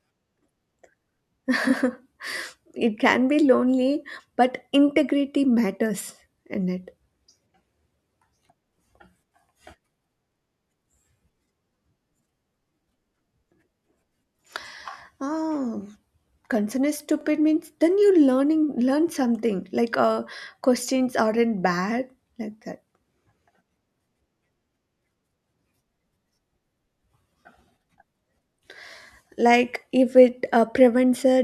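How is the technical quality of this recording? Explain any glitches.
The recording has a recurring glitch from overlapping chunks. At 7.19–7.21 s, 17.21–17.23 s and 27.23–27.26 s, about 23 ms of speech plays twice. The audio was handled in 10-second chunks, and each chunk starts slightly before the previous one ended, so the join repeats a sliver. This is heard as a brief click or stutter every 10 seconds. On a waveform, each join shows a duplicated stretch with a discontinuity. On a spectrogram, it appears as a thin vertical seam at the same spacing.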